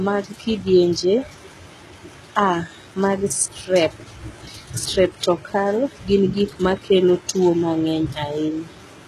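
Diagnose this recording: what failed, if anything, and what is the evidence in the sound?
HE-AAC compression runs through the whole speech clip, and the codec stage is the likely point of failure. The damage is plainly audible: the treble sounds bright yet synthetic, with s sounds turning gritty and metallic, and there is nothing above 12.4 kHz. The coder has kept only the lower spectrum and rebuilt the top by copying lower bands upward under a coarse envelope, so the upper harmonics no longer line up, which fits a rate near 16 kbps.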